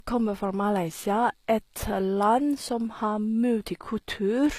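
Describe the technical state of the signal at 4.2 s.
At 4.2 s, as across the whole clip, the speech shows low-bitrate audio saved at a high bitrate: nothing sounds above 14.9 kHz, and the earlier encode's coding artefacts remain despite the MP3's high rate, most likely from an earlier low-rate encode that the re-encode could not restore.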